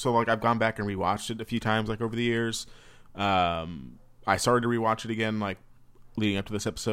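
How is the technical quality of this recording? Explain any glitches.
The recording has one fault near the end. Sample clock jitter starts at 4.67 s, after "I started to", and lasts to the end: the converter's timing wanders by around a microsecond or two. Samples land early or late, so steep, loud, bright speech picks up a rough hiss roughly 40 dB down that vanishes in pauses.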